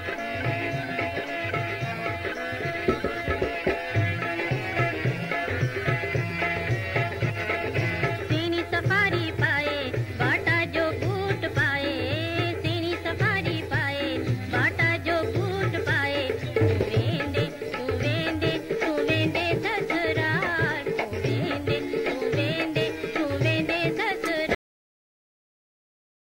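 A cut-off end arrives at 24.55 s, where the sound halts mid-event and falls straight to digital silence for the remaining 1.7 s. The final buffers were never written out, so there is no natural decay, just an abrupt wall of nothing.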